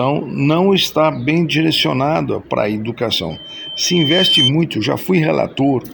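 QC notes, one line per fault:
3.30–4.51 s, loudspeaker feedback squeal: a tone at 3.1 kHz swells over about a second until it sits about 5 dB above the sound. The microphone is hearing its own loudspeaker, and at this frequency the loop gain passes one, so the tone feeds itself and keeps rising.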